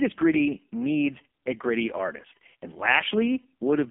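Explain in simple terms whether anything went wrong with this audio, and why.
Yes. The speech was squeezed through an AMR narrowband mobile codec, the old phone-call format, at a very low setting for the whole clip. Nothing above about 3.5 kHz survives, so the voice sounds thin and muffled, and heavy coding damage makes it buzzy and synthetic.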